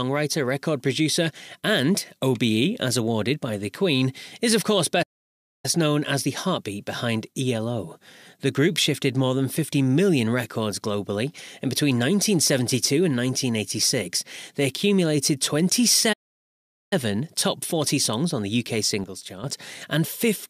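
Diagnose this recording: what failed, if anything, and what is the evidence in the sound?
The speech cuts to silence twice: from 5.02 to 5.65 s, after "is of course" and before "known as the heartbeat", and again from 16.12 to 16.93 s, gaps of about 0.61 and 0.79 s. This is a playback stall, likely the player's buffer running dry or its thread blocking, then resuming where it stopped.

From 19.04 to 19.44 s the level drops abruptly by about 8 dB, with the background noise falling in step. This is a sudden gain jump, likely a digital gain setting applied at playback without a ramp, scaling the whole signal between adjacent samples.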